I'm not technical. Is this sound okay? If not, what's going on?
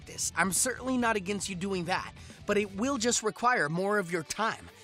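Yes, this one sounds fine, with nothing going wrong anywhere in it that you'd need to worry about.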